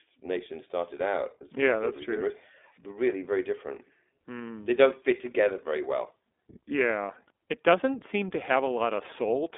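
Speech coded throughout with the iLBC codec, band-limited to 250 Hz–3.6 kHz, sounds plainly rough and synthetic, consistent with 20 ms frames at 15.2 kbps.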